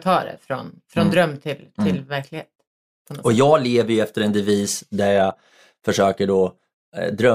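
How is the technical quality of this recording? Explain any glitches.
No glitches or technical faults are audible anywhere in the recording.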